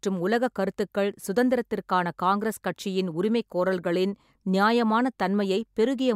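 No technical faults occur at any point in the clip, so there is nothing to place in time order.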